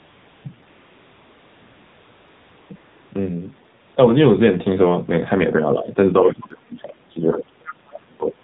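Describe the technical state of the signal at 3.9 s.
The AMR comfort noise in this span, from 3.80 to 3.96 s, comes from the phone halting speech frames for 160 ms. The receiver substitutes smooth synthetic noise for the real background, which switches in and out. The AMR narrowband mobile codec throughout encodes speech at 7.4 kbps, which leaves plainly audible buzzy, synthetic damage and nothing above 4 kHz.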